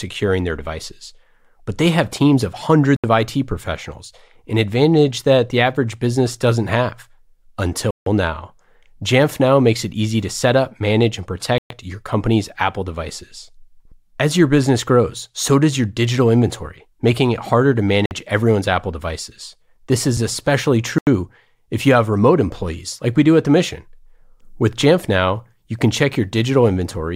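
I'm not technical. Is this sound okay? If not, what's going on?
No. The speech briefly drops to total silence five times, then carries on: at 2.96 s right after "they have teams of", at 7.91 s, at 11.58 s between "set up manage and" and "your company's", at 18.06 s after "making it harder to", and at 20.98 s. Each gap lasts between about 0.05 and 0.16 s. This is likely a Bluetooth stall: wireless interference delayed the audio reaching the headphones, their small reserve ran out, and playback paused until the missing audio arrived.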